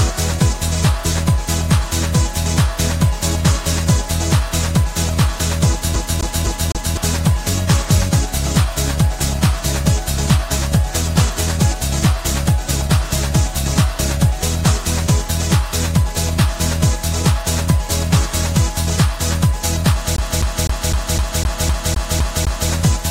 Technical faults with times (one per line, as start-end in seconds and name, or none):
5.96-6.97 CD stuck on one turn
20.16-22.71 CD stuck on one turn